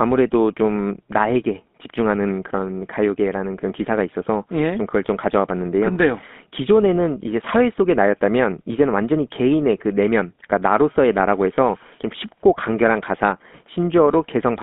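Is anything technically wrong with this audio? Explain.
Yes. Throughout the speech there is a buzzy, gravelly roughness, with nothing below about 200 Hz or above 3.6 kHz. That is GSM full-rate codec damage, consistent with a 13 kbps coder that models the vocal tract and rebuilds the excitation from a sparse, regular pulse train, leaving a plainly audible rasp.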